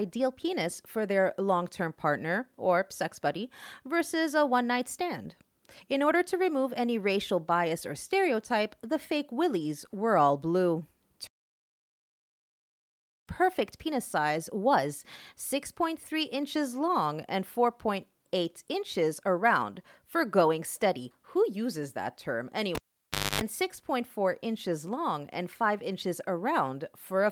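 A playback stall runs from 11.27 to 13.27 s. The speech stops mid-flow for 2 s of silence and then carries on. The likely cause is the player running short of data, or its thread being blocked, so nothing reached the output until it recovered.

A cable pulled and plugged in follows at 22.75 s. A pop cuts the speech to near silence for about 0.61 s. Then 50 Hz mains buzz sounds for about 0.26 s as only the plug's tip makes contact, before a second pop as the signal returns by 23.41 s.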